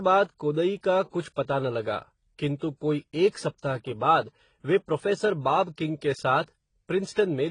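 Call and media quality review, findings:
Speech band-limited, nothing above 10.1 kHz, throughout the clip. Two layers of codec artefacts heard together.

Likely transcoding between lossy codecs: a low-rate spectral-band-replication stage feeding an AAC-LC encode, consistent with HE-AAC near 16 kbit/s then AAC-LC near 32 kbit/s. The second encoder re-codes the first stage's artefacts and keeps its lower cut-off.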